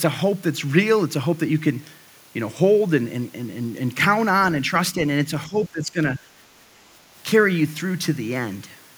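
Speech suppressed in double talk appears from 5.47 to 5.98 s and again from 6.19 to 6.25 s in this speech clip. The level sinks by roughly 15 dB in the first stretch and by around 10 dB in the brief second dip, and about half a second of the talker is pulled down in total. The likely cause is an echo canceller that could not tell the near talker from loudspeaker echo while both sides spoke, so it attenuated everything.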